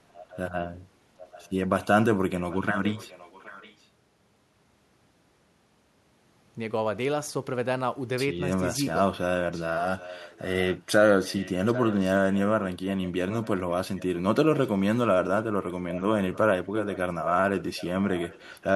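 A faint delayed copy of the speech trails about 0.77 s behind at 0.13–0.38 s, 1.21–1.5 s, 2.4–3.87 s, 8.97–14.02 s and 15.7–18.6 s. It is very quiet in the first two and somewhat louder from 2.4 s on. This is an echo leak, likely from a loudspeaker whose echo canceller let the sound its microphone picked up get back into the call.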